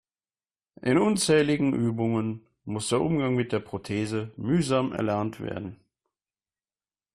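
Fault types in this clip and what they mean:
Nothing stood out on listening to the speech.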